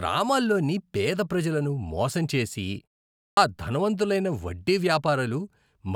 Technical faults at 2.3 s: none

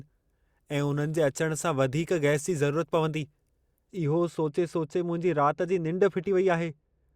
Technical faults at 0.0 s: none

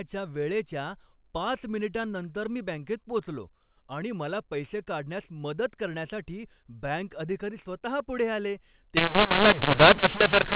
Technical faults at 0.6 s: none

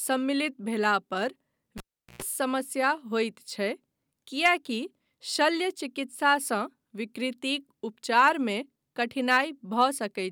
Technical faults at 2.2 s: cable pulled and plugged in

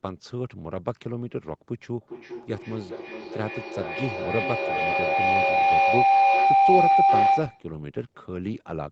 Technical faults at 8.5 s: none

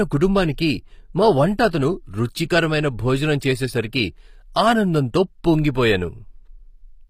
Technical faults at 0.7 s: HE-AAC compression

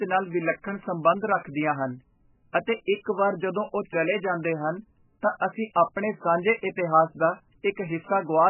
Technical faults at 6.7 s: MP3 compression

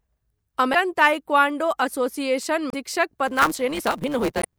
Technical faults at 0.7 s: damaged data in a compressed stream

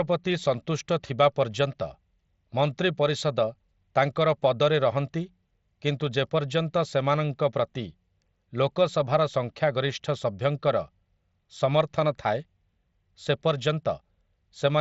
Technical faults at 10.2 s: none

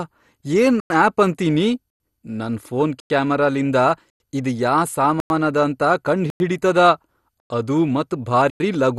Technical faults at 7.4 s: MP2 compression; gap between chunks

